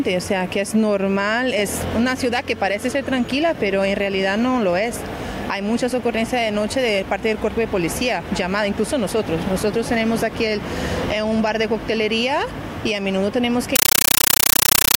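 Compressed stream played as audio, 13.76 s to 15.00 s: undecoded Dolby Digital frames become loud chattering static, 9.33 ms bursts repeating 31.25 times a second.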